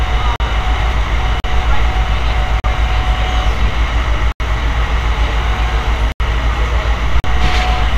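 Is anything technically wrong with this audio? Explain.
Yes, there are six blocks of digital silence, at 0.36, 1.4, 2.6, 4.32, 6.12 and 7.2 s, four lasting 40 ms and two lasting 80 ms. The audio drops straight to silence and back without a fade, so each gap is a short hole, likely from the output buffer not being filled in time.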